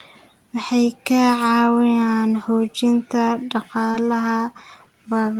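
At 3.91–3.96 s there is short concealed packet loss. A 20 ms gap was filled by extending the preceding sound. It is heard as a brief smear.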